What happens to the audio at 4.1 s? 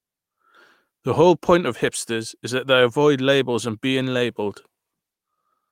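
Nothing goes wrong at 4.1 s; the speech carries on intact through that moment, with no dropout, click or distortion.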